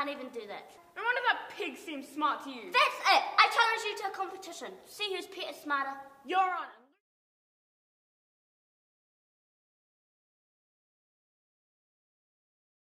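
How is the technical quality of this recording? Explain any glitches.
No glitches or technical faults can be heard here.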